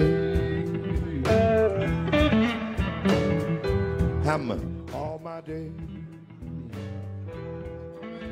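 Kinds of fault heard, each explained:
Zipper noise: from 4.22 to 5.18 s the level drops by roughly 15 dB, not as a smooth fade but in unsmoothed 2 dB jumps, around seven per second. Each jump leaves a small click, so a ticking zip rides on the sound during the fade.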